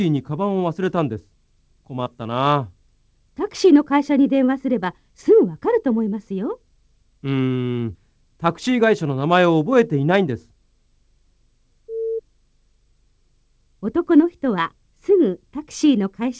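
At about 2.04 s a short concealed packet loss occurs: roughly 20 ms of audio failed to reach the decoder in time, and the receiver papered over the gap by extending the preceding sound before blending back into the real signal around 2.08 s. The repair is audible as a brief smear or wobble, heard through the call path's band limit, which leaves nothing above 8 kHz.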